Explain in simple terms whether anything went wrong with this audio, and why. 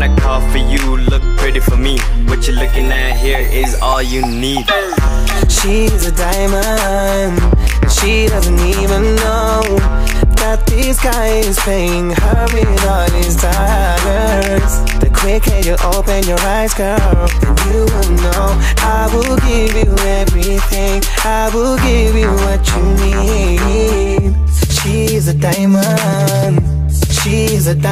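Nothing went wrong; no faults can be heard.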